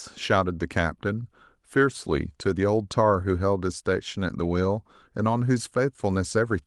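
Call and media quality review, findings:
No faults found: the speech comes through the WebRTC call path as expected, with its top end rolling off near 12 kHz, which fits normal Opus superwideband coding.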